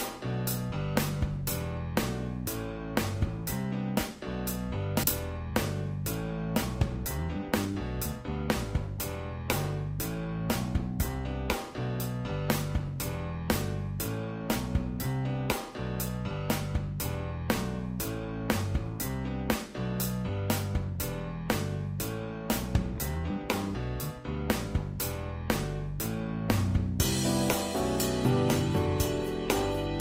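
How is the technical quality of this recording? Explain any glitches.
Two network-related glitches affect the recording: a skip ahead and a short jitter buffer speed-up.

At 5.03 s, a skip ahead occurs. A stretch of audio was discarded while later audio was already queued, either lost in transit or dropped when the buffer overflowed. Playback then jumps straight to the newer material with no filler in between. Roughly 0.4 s of sound vanishes, and the audio on either side of the cut is spliced almost directly, producing an abrupt lurch forward.

From 7.05 to 7.73 s, a jitter buffer speed-up follows. The receiver's buffer was holding more audio than its target, so it trimmed tiny slices of one or a few pitch periods over and over to shrink the backlog. In total it removed only a few hundredths of a second. Playback runs at about 105% speed while the pitch stays unchanged, so this passage sounds slightly rushed before the pace settles.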